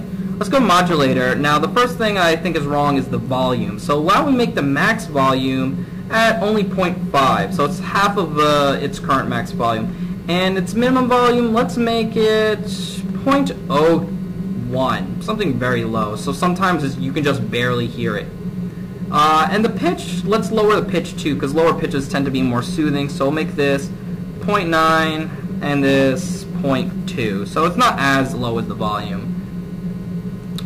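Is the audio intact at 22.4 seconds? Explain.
No. Hard clipping runs through the whole clip, including 22.4 s. The signal is driven about 14 dB past what a stage can pass, so roughly one sample in twenty is cut off flat, giving harsh fuzz on loud moments. The waveform shows flattened tops; the spectrogram shows harmonic smear reaching high frequencies.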